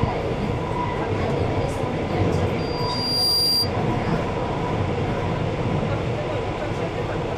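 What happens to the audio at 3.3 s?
A piercing 4.8 kHz tone swells over most of a second to stand out above the sound, lasting 2.58–3.74 s: loudspeaker feedback squeal, where the microphone re-amplifies its own loudspeaker.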